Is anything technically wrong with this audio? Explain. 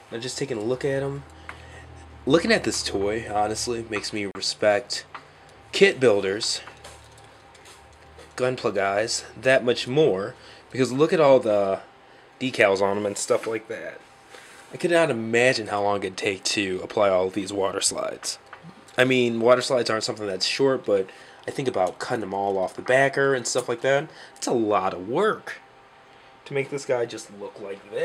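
Yes. From 4.31 to 4.35 s, a 36 ms gap cuts through continuous sound with smeared edges before resuming: a gap at a join of encoded pieces, where untrimmed encoder delay and padding remain.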